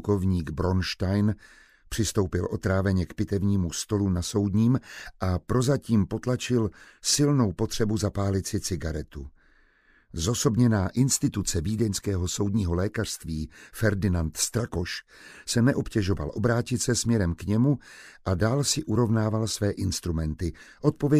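From 4.62 to 5.12 s, five short, evenly spaced ticks sound across about half a second. Each is very short, the longest about 1.5 ms. These are CD scratch ticks. A scratch or blemish on the disc wipes out more data than the error correction can rebuild on every turn of the disc, so the player patches or silences those few samples and leaves a tick each time round.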